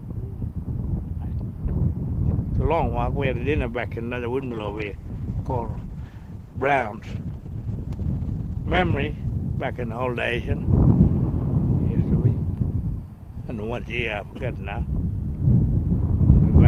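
From 4.43 s to 10.45 s the audio turns rough and coarse. This is a call bitrate drop. The link's bandwidth estimate fell, so the encoder spent far fewer bits. The sound fits a fall from 48 kbps to about 12 kbps, bottoming out for about 4.4 s before recovering.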